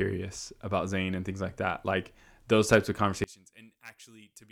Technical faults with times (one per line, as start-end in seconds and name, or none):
3.24-4.51 one channel inverted